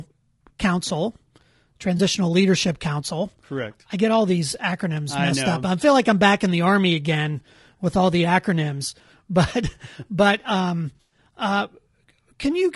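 Across the whole speech clip the voice sounds rough and grainy, with a hiss-like fill between the harmonics and an upper band that sounds thinned and somewhat synthetic. This is most likely low-delay AAC compression (AAC-ELD), at a bitrate around 32 kbps. Its short frames cannot resolve pitch harmonics finely, and at this low bitrate bits run short. On a spectrogram the harmonic stripes look blurred, noise fills the gaps between them, and the top band appears patchy or smoothed.

At 1.98 to 2.00 s comes a brief AAC frame loss with concealment. About 20 ms of audio, consistent with a single lost frame, was rebuilt by the decoder from the previous good spectrum. It sounds like a tiny smeared, noisy blip. On a spectrogram it shows as a thin vertical slice where harmonics dissolve into diffuse energy. The waveform shows a short stretch whose envelope no longer follows the surrounding voice.

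Just after "but um", from 10.95 to 11.18 s, a longer AAC frame loss with concealment occurs. About 140 ms is missing, spread over 160 ms, and the longest unbroken gap is around a tenth of a second. The concealment repeats and scrambles the last spectrum and lets it decay, so the sound turns phasey and washy, dips toward silence, then fades back. A spectrogram shows smeared noise bands losing energy. The waveform shows a sagging, irregular envelope.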